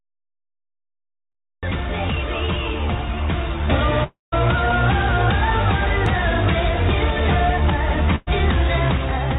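The clip opens with about 1.63 s of digital silence before the sound starts abruptly at 1.63 s. This is a cut-off start. The capture began partway through an ongoing sound, so there is no natural attack or fade-in. The signal jumps from nothing to full level at once, and the first part of that sound is simply absent.

At 2.09 s there is a brief skip where roughly 20 ms of audio is gone and the two sides are butted together with no silence between them. The same skip recurs at 6.06 s, about 4 s later. That regular spacing is the signature of audio missing between chunks, likely caused by a recorder or processor working in 4-second blocks and dropping a small slice at each handover. Each skip sounds like a small jump in the sound.

From 2.46 to 2.50 s there is a short concealed packet loss. About 20 ms of the stream did not reach the decoder in time. The receiver filled a 19 ms stretch by extending the preceding sound and then crossfaded back into the real signal. 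The result is a momentary smear or wobble.

Between 4.04 and 4.34 s is a long network dropout, likely a stall in delivery, with about 280 ms of audio never played. The receiver first continues the last sound as a fading buzz or hiss, then gives up. The final 160 ms is silence. The sound resumes further along, with the intervening material skipped.

From 8.16 to 8.29 s a burst of packet loss removes about 100 ms of consecutive audio. Concealment covers the whole gap, about 110 ms, with no silent portion. The last sound is held and progressively attenuated, so it comes across as a sustained, decaying buzz or hiss before the signal picks up again past the missing section.

Throughout, the audio carries nothing above 4 kHz along with the codec's usual companding noise. This fits the G.711 A-law call path at 64 kbps, which is working as designed.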